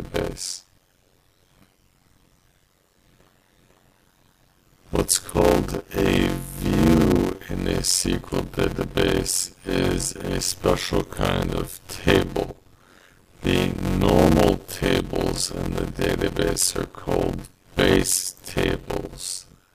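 Block size mismatch (padded) runs from start to end: each block written, which fits 256 samples, is shorter than the block read, so zeros fill every gap. This chops the audio into a 91.9 Hz buzz and stretches it to 0.533 times normal speed, timbre unchanged.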